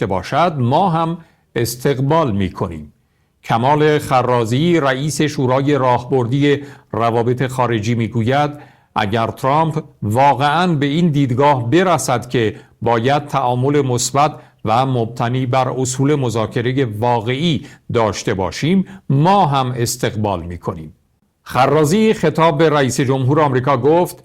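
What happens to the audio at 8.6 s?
Nothing goes wrong at 8.6 s; the audio there is intact, with no dropout, click or distortion.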